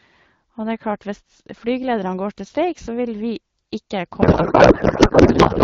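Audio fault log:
4.21–5.64 s, codec payload misread: the speech dissolves into garbled noise and warble that barely follows it, which points to octet-aligned AMR-WB frames being unpacked as bandwidth-efficient, so every field is read shifted. On a spectrogram, harmonic striations give way to smeared, structureless broadband hash.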